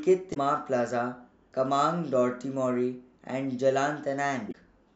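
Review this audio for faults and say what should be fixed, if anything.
Two short bursts of damaged data in a compressed stream break up the speech, from 0.30 to 0.37 s and from 4.48 to 4.55 s, each about 70 ms long. In both, corrupted bytes in the encoded stream make the decoder misread the affected frames and lose sync until it finds the next valid frame header, so each spot comes out as a brief chirp, squawk, click or short hole. To prevent this, verify file integrity with checksums after transfer and use a transport or container with error detection.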